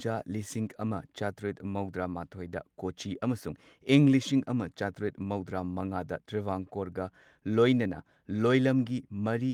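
No technical faults are audible anywhere in the speech.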